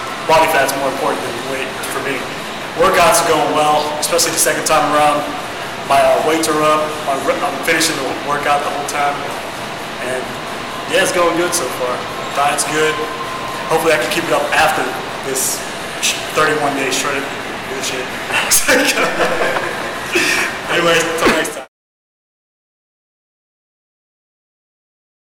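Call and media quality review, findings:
Hard clipping throughout; probable gain-stage overload before converter: harsh fuzz on loud sounds, about 17 dB over. Waveform flat-topped; spectrogram shows high harmonic smear.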